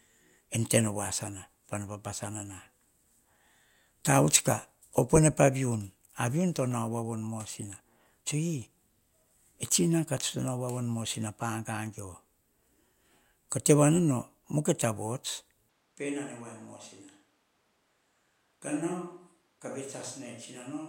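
At 15.69 s the speech abruptly turns roomy and hollow, with thinner bass, and stays that way to the end. This is most likely a switch to a distant microphone, with the close microphone's signal lost and a farther pickup carrying the audio. The level falls by about 10 dB, and room noise sits roughly 35 dB below the speech. The waveform shows a sudden step down in amplitude. The spectrogram shows weaker low frequencies, smeared reverberant tails and a raised noise floor.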